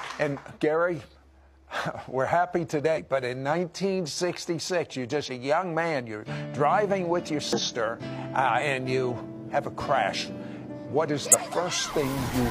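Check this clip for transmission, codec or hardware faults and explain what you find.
There are compressed frames skipped at 2.93–3.00 s, 5.25–5.31 s, 7.53–7.60 s, 8.55–8.60 s and 11.20–11.39 s. Whole coded frames never reach the output, so the audio jumps ahead, roughly 100 ms at the first, third and fourth and roughly 50 ms at the second and fifth.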